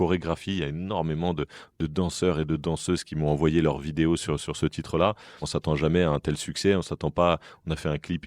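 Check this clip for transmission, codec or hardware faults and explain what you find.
No faults found anywhere in the speech; nothing to report.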